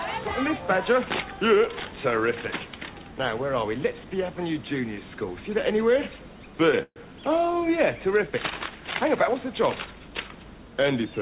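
At 6.83 to 6.98 s, a call audio freeze: a fading buzz then brief silence, likely a starved jitter buffer; the waveform shows a decaying smear, then a flatline.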